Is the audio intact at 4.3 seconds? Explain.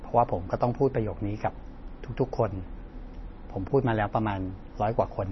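No, at 4.3 seconds the speech carries the same damage it has throughout, most likely from heavy MP3 compression. Nothing survives above about 5.9 kHz, and the weak detail swirls in and out, which fits a bitrate around 24 kbps.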